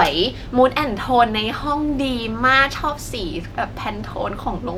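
No technical faults can be heard in this speech recording, so there is nothing to describe in time order.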